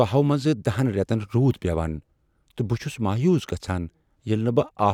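Speech recording, with no technical faults present. Nothing in the audio points to a problem in how it was captured, processed or played back.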